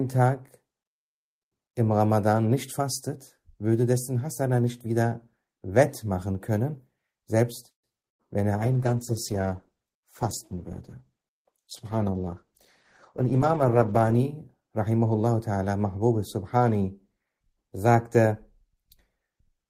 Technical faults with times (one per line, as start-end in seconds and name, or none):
7.69-7.86 call audio freeze
8.07-8.22 burst of packet loss
8.58-14.31 call bitrate drop
13.20-14.61 jitter buffer speed-up